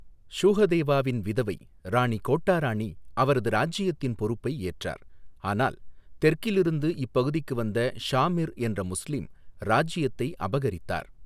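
No technical faults are audible.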